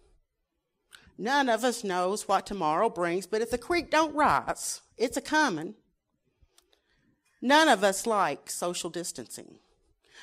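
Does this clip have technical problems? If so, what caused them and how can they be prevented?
No, this clip has no technical problems, so there is nothing to trace to a cause or prevent.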